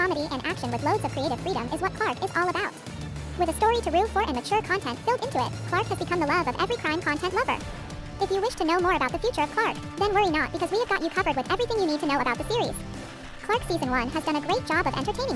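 Wrong sample rate, throughout the clip: the audio plays back 1.5 times too fast and about 7 semitones too high, because the samples are clocked out faster than they were captured, with no conversion. This fits 16 kHz material played at 24 kHz, shifting speed and pitch together.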